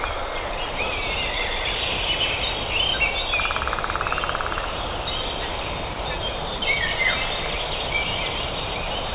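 Twice the sound briefly gives way to a thin bed of steady noise, from 5.94 to 5.96 s and again from 6.58 to 6.62 s, a 40 ms gap. Both are likely sound dropped by the voice detector, which mistook the audio for background and let comfort noise stand in, over a band that stops at 4 kHz.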